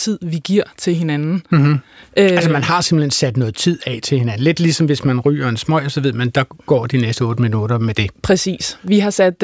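No faults detected anywhere in the speech recording.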